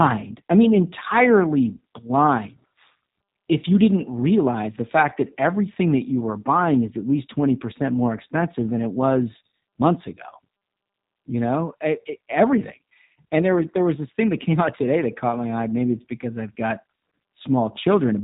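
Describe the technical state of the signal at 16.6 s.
At 16.6 s you're hearing G.729 codec damage, same as the whole clip. The speech is rebuilt from a vocal tract filter, pitch predictor and sparse pulses, consistent with an 8 kbit/s stream, so nothing above 4 kHz survives and it sounds rough and synthetic.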